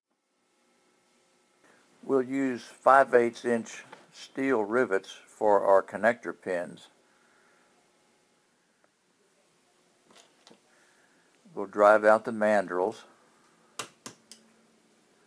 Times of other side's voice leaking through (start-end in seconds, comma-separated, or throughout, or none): none